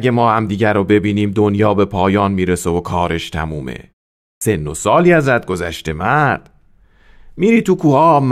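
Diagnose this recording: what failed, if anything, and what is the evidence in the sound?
The fault is a clipped start after a pause, at the playback stage. At 4.34 s, after a silence of about half a second (0.49 s), speech resumes abruptly with its first 74 ms missing, until about 4.41 s. The output device dropped into a low-power or unlocked state during the gap and took that long to wake, so the opening of the word was swallowed. Muted pauses, by contrast, only take away the background between sounds. Here the speech onset itself is gone.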